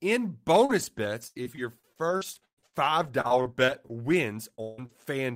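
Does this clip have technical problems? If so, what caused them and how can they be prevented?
Yes. Four kinds of fault are audible, all from packets arriving late or not at all.

Repeated packet loss (robotic sound) runs from 0.65 to 4.15 s. There are 18 gaps, the longest 119 ms, and about 18% of that stretch is concealed. Each hole is filled by stretching the previous sound, giving a choppy texture. A spectrogram shows smeared, repeated harmonic blocks, and the waveform shows flattened, looping segments. A larger jitter buffer and a steadier network path prevent this.

Short concealed packet loss occurs at 4.55–4.60 s and 4.86–4.91 s. Each hole is a few hundredths of a second, bridged by extrapolating the preceding sound and then crossfading back. It is heard as a brief smear. On a spectrogram it is a short blurred patch with continued harmonics, and the waveform shows a slight envelope glitch. 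Adaptive jitter buffering reduces these.

At 4.62–4.80 s the sound turns into a decaying continuation of what came before, lasting about 160 ms with no silence, most likely a long network dropout. The spectrogram shows frozen harmonics fading out, and the waveform shows a repeating, decaying pattern. Redundant routing or a wired connection prevents this.

Lost packet rebuilt from error correction appears at 4.78 s and 4.89–4.91 s. In each case a missing 20 ms frame was replaced by the low-bitrate copy carried in the next packet, so there is no gap, only a rougher, noisier instant. The spectrogram shows a grainier slice. Sending extra redundancy or raising the bitrate helps.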